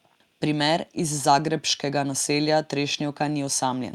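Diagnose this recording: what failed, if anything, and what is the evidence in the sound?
Listening through the speech, nothing stood out at any stage of the chain.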